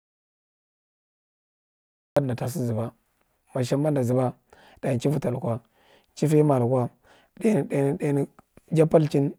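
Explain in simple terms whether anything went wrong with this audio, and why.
The clip opens with an audio dropout to silence: from the very start until about 2.17 s there is silence, with no room tone at all, before the speech cuts in at "nda ta sa". The input was likely lost, so whatever came before is missing.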